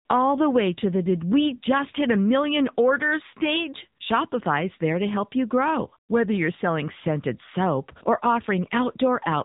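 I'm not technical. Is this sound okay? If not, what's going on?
No. The whole clip carries the AMR narrowband mobile codec's phone-call sound: nothing above 3.8 kHz, plus a buzzy, synthetic edge that simple muffling wouldn't add.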